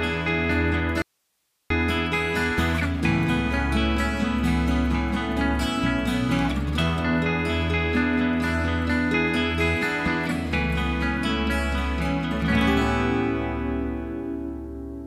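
At 1.02 s the sound cuts out abruptly and returns at 1.70 s, an audio dropout to a faint residue lasting 0.68 s. Only hiss remains, roughly 50 dB below the signal, likely because the signal was lost while the downstream path stayed live. The waveform collapses to a thin noise band, and the spectrogram shows a sharp-edged, broadband, faint gap.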